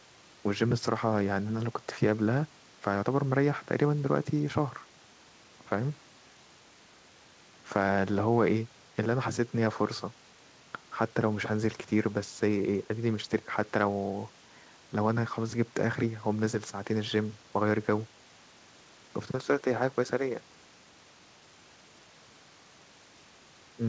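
The clip is speech carried over a G.722 call path at 64 kbps, with nothing above 8 kHz, and nothing is technically wrong with it.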